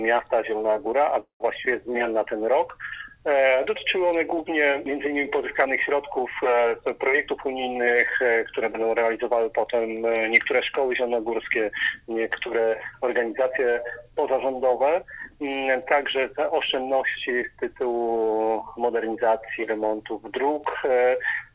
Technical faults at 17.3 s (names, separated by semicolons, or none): jitter buffer speed-up